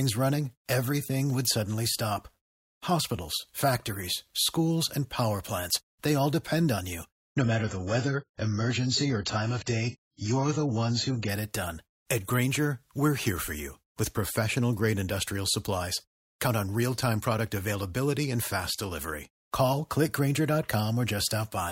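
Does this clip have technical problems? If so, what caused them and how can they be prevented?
Yes. From 7.29 s to 11.29 s, between "all depend on you" and "it done", the speech switches abruptly to an adaptive stream at a lower bitrate. The player swapped from the 96 kbit/s AAC rendition to a 16 kbit/s one when the connection slowed, so nothing above about 7.7 kHz survives and the top end sounds dull and swirly, then returns to full quality with no gap. Prevention: give the player a larger buffer or set a higher minimum bitrate rung.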